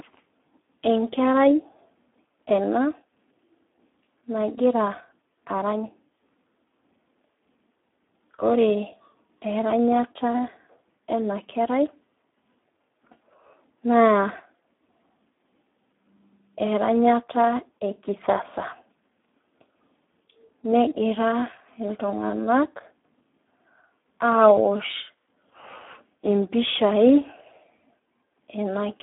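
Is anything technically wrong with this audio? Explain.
Yes, the whole clip has been through the Speex codec. The sound is band-limited to roughly 300 Hz to 3.5 kHz, with nothing above 3.7 kHz. It's heavily starved of excitation bits, which fits an 8 kbps setting, so the speech comes out noisy, hoarse and edging toward robotic.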